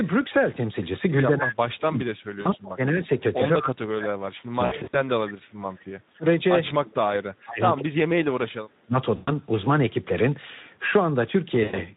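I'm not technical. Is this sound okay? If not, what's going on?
No. Throughout the whole recording the speech sounds hoarse and grainy, with a fuzzy, hissy quality instead of clean crisp consonants. That is the Speex codec, an older internet-calling speech compressor, squeezing the voice into very little data. With so little to work with, it can only roughly rebuild the voice, which leaves this rough, noisy texture on every word.

In three stretches the speech sinks far down in level, sometimes to near silence, and comes back unevenly: from 1.28 to 3.08 seconds, from 3.57 to 6.26 seconds, and from 6.77 to 8.63 seconds. This is speech suppressed in double talk. It likely happened because both ends of the call were talking at once. The call's echo canceller, which tries to stop the far side hearing itself back, couldn't tell the two voices apart and turned this one down for much of each stretch.

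There are also brief moments where the voice smears into a buzzy, droning or hissy sound that fades away. These come at 2.41 to 2.54 seconds, 4.65 to 4.97 seconds, 9.15 to 9.31 seconds, and 11.63 to 11.83 seconds. This is VoIP packet loss concealed by the speech codec. Small pieces of the call never arrived, and the decoder patched the gaps by stretching out the last sound it had. The gaps range from a very short one of about 40 ms to a cluster of drop-outs totalling about 180 ms.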